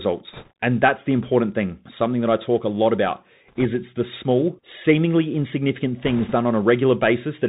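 Bluetooth CVSD headset codec damage runs through the whole of this speech clip. Nothing above 4 kHz survives, s sounds come out scratchy, and a granular hiss sits under the voice. This is the one-bit up-or-down coding of narrowband headset audio, which fits a 64 kbps stream, with its adaptive step too slow for loud high content. Bit errors on a Bluetooth voice link appear at 0.33 to 0.51 s, 3.48 to 3.65 s and 6.02 to 6.35 s as bursts of rushing, crackly noise without loud clicks. Roughly a few percent of bits are flipped, each carrying only a small step that soon decays.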